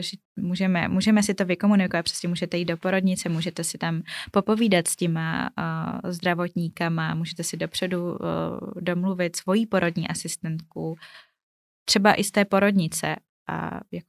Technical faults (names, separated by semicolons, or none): none